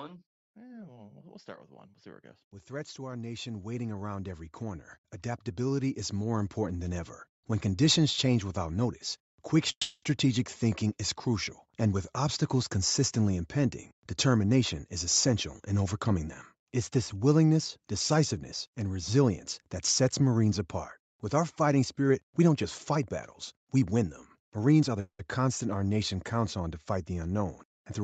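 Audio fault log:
2.67–4.92 s and 5.55–7.08 s, automatic gain rising: the level climbs steadily, by about 10 dB over the first span and about 7 dB over the second, as the gain control decides the input is too quiet and turns itself up. The background noise swells along with the speech, and that shared lift is what marks it as gain riding rather than someone simply talking louder. The change is a gradual ramp over a second or more, not a sudden step.
9.71–10.04 s and 25.0–25.21 s, call audio freeze: the sound stalls after "change without notice quick" and carries on as a fading, buzzy continuation of the last sound before going quiet for about 100 ms, then resumes with "thinking is crucial". The stall lasts 310 ms. A shorter 190 ms stall follows at 25.0 s. Nothing is skipped, so the likely cause is packets held up on the way, leaving the jitter buffer empty. This differs from a dropout because the speech picks up exactly where it stopped, with only a gap added.
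22.10–23.07 s and 23.57–24.96 s, jitter buffer speed-up: right after "our fighting" the speech runs at about 111% of normal rate, then at about 108% in the second span, with the pitch unchanged. Each span sheds roughly a tenth of a second as the receiver trims one or a few pitch cycles at a time to work off excess buffered delay. The result sounds hurried rather than higher-pitched, which is how it differs from a resampling or playback-rate error.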